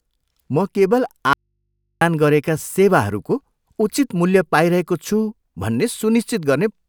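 At 1.33 s the speech cuts off abruptly and stays gone until 2.01 s, an audio dropout to a faint residue lasting about 0.68 s. The wanted signal was lost, but the input stayed live, so the gap holds only a low mains hum far below the speech, roughly 55 dB down. A likely cause is a broken connection ahead of a still-open input. On a waveform the trace collapses to a near-flat line with sharp edges. A spectrogram shows thin, steady hum bands.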